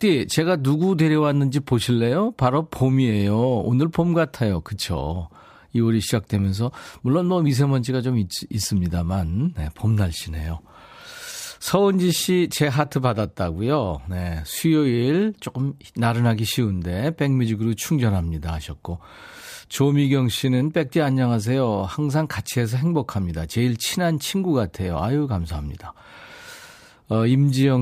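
No technical faults are audible anywhere in the speech recording.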